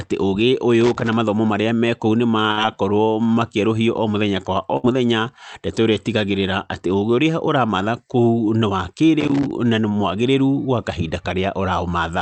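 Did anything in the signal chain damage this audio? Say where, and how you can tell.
Yes. Loose connector crackle sits in the analogue wiring, from 0.81 to 1.13 s just before "mathomo marĩa mekũu nĩ", and again from 9.20 to 9.51 s. Both are irregular bursts of crackle and scratching laid over the speech, each about 0.3 s long. That ragged, uneven texture points to a worn or dirty contact making and breaking as it shifts. The chopping breaks up the signal, and any DC present on the line turns each break into a click.

A burst of packet loss occurs on the network path at 2.51 to 2.59 s, right after "mathomo marĩa mekũu nĩ", and at 4.77 to 4.86 s, after "mũthenya kwa o". Each time the receiver stretches the last sound for about 60 ms, and it fades as a held buzz or dying hiss. The speech then picks up again with about 60 ms skipped, so the words jump forward instead of flowing on.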